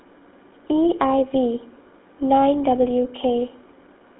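From start to finish the speech has been through the GSM full-rate codec, which sounds like a 13 kbps setting. The vocal tract is modelled and driven by sparse regular pulses, so everything sounds buzzy and gravelly, squeezed into roughly 250 Hz to 3.6 kHz.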